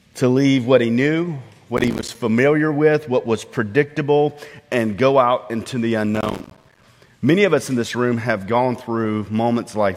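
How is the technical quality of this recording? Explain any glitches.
The recording has two bursts of processor overload crackle. The first runs from 1.77 to 2.15 s. The second is longer, from 6.15 to 6.84 s. In both, the processor could not finish its small audio buffers in time, missing dozens over a short stretch. Each miss drops a few milliseconds of sound and leaves a short silent hole with hard edges. The holes come so fast that they blur into gritty, tearing crackle over the sound. It stops once the load passes.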